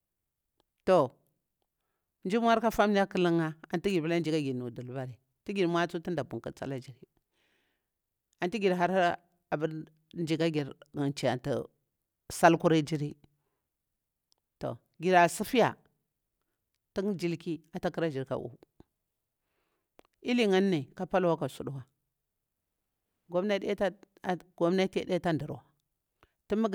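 No technical faults can be heard anywhere in this speech recording.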